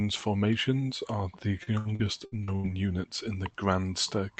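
From 1.63 to 2.67 s, just before "units in the", there's repeated packet loss: a run of short dropouts, the longest 82 ms, each patched by stretching the previous sound. About a third of that stretch is filled in, so it turns choppy.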